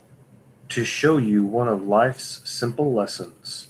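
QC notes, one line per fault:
No faults were found in this speech clip. Nothing here needs a time or a note.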